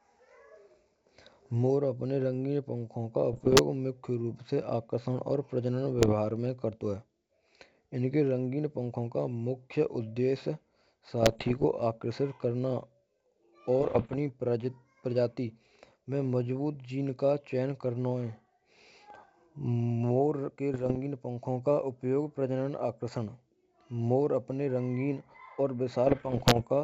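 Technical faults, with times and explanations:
3.33–3.61 s, 5.98–6.15 s, 11.23–11.65 s, 13.80–14.16 s, 20.74–20.97 s (just before "pankho ka") and 26.07–26.67 s: bit errors on the ADPCM link. Pops and rough, gritty bursts with brief jumps in level cut through the speech. Corrupted bits, at about one to one and a half percent, throw the decoder's step size and predictor off, so each error rings on for some milliseconds before the G.722 path settles.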